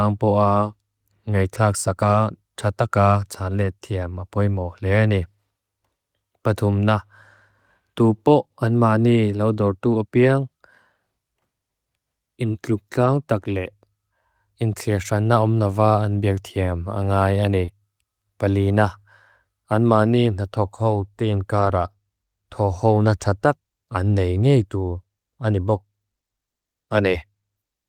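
At 2.01 s, just before "tak taka tan", a lost packet was rebuilt from error correction. The next packet carried a low-bitrate copy, and the decoder played it. There is no gap, only a brief rougher, noisier patch. The same happens at 3.61 s, after "tak taka tan", and at 4.95 s, after "apoi mo le". Longer rebuilt stretches follow at 13.01 to 13.07 s and 21.57 to 21.67 s.

From 17.65 to 17.69 s there is a short concealed packet loss. About 20 ms of audio arrived too late. The decoder extended the preceding speech to fill it, then blended back, so the moment sounds briefly smeared. A rebuilt copy joins in at 17.67 s.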